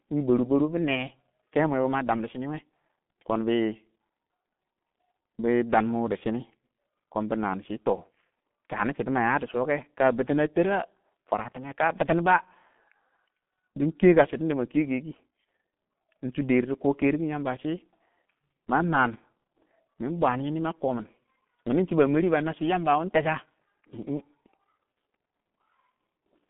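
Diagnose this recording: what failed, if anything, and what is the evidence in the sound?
The codec stage failed: the whole recording carries heavy G.723.1 codec damage. The speech is muffled and hoarse with smeared consonants, which fits a bitrate near 6 kbit/s. A spectrogram shows energy confined to about 150 Hz to 3.5 kHz, with nothing above 3.8 kHz, and coarse frame-to-frame smearing.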